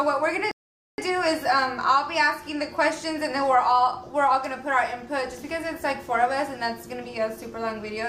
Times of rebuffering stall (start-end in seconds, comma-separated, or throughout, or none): 0.51-0.98